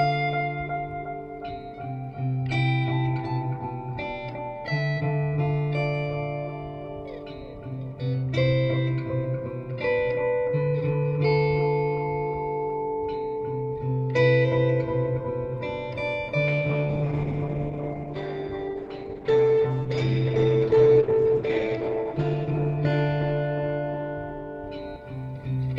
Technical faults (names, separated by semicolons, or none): call bitrate drop